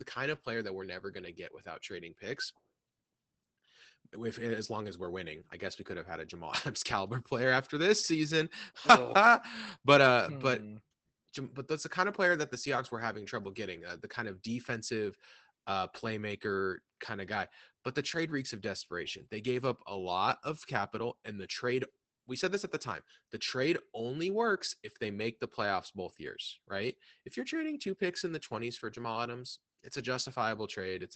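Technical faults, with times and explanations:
Throughout, Opus voice compression: the SILK linear-prediction coder runs wideband at a low rate, which fits roughly 12 kbps. It discards everything above 8.6 kHz and codes the excitation coarsely, so the speech sounds muffled, hoarse and faintly robotic.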